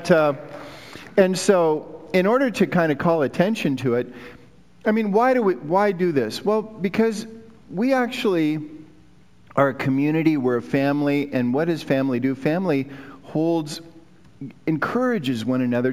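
Imaging from linear upsampling runs through the entire audio. The content stops near 8 kHz and the band just below that edge is dulled, which points to a 16 kHz source raised to 48 kHz by straight-line interpolation between samples. That interpolator filters poorly, so a mirrored copy of the spectrum survives between 8 kHz and 16 kHz, roughly 30 dB below the signal. It is heard as a faint metallic shimmer on bright, high-frequency content.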